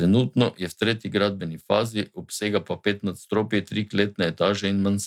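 Nothing in the speech stood out as a technical fault on listening.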